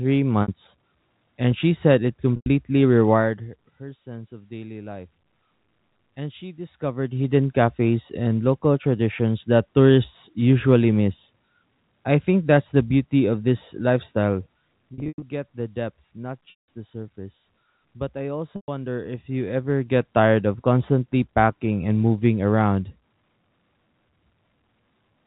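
Packet loss with pitch repetition shows up at 0.42 s (60 ms), 2.36 s (100 ms), 14.94 to 15.22 s (200 ms scattered), 16.5 s (180 ms) and 18.56 s (120 ms). The receiver loops the last pitch period into a brief buzzy hold, fading toward silence in longer gaps.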